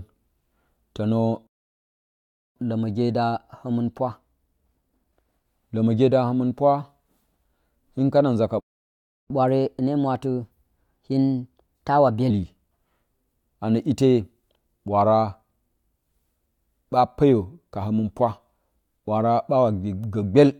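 At 1.47 s the speech cuts to silence for about 1.09 s, a playback stall, likely the player starving for data or its thread being blocked. From 2.56 to 5.56 s, catch-up at higher speed runs at 1.1x, lifting pitch roughly one and a half semitones. After "hin kana nza ka", a second stall silences the audio from 8.60 to 9.30 s, about 0.70 s. Catch-up follows from 9.30 to 12.30 s at 1.15x, about two semitones sharp.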